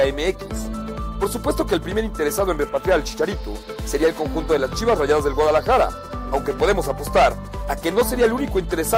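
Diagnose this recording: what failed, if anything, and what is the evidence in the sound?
Nothing failed here, and there is no evidence in the sound of any fault.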